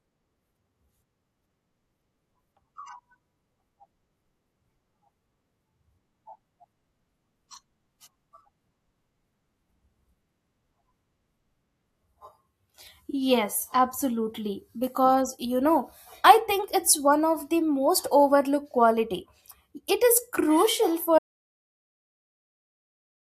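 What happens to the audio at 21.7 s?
An audio dropout to silence runs from 21.19 s to the end, just after "is crucial". The input was likely lost while recording continued, leaving silence with no room tone.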